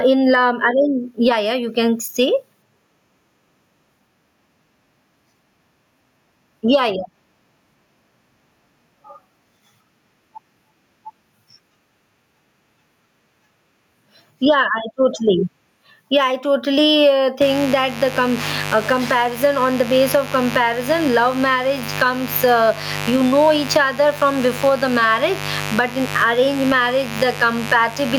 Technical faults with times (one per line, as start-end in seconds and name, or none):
0.00-28.19 gain pumping
17.41-28.19 mains buzz